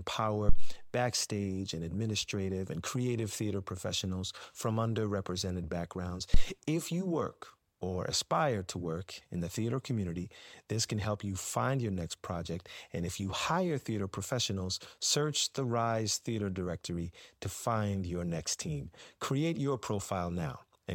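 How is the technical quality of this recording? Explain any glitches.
The speech is marred by two phantom power thumps. The first runs from 0.49 to 0.80 s and the second from 6.34 to 6.45 s. Each is a deep low-frequency thump peaking at about -11 dBFS. The first dies away over about 69 ms and the second over about 25 ms. Switching a supply on a live input puts a voltage step on the line. The coupling capacitors pass that step through as a thump.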